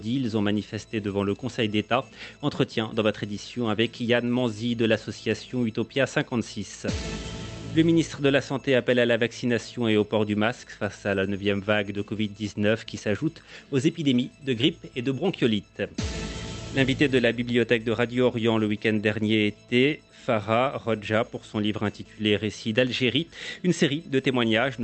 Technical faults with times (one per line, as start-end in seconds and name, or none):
none